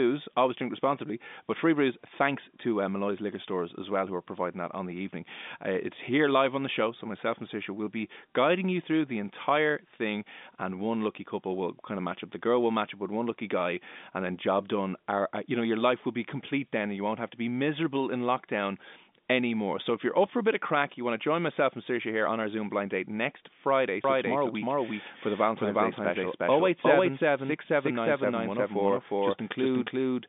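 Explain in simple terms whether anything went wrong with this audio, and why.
From 24.04 s to the end, the speech is heard twice. A doubled audio track starts abruptly, with a second copy about as loud as the first, trailing it by roughly 0.4 seconds. The likely cause is the call audio being captured again through a slower path.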